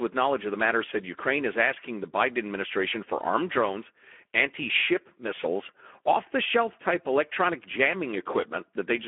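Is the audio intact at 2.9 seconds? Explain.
No, Speex codec damage runs through the whole clip, including 2.9 s. Too few bits for the excitation leave the speech hoarse and noisy within a 300 Hz–3.4 kHz band, at roughly 11 kbps.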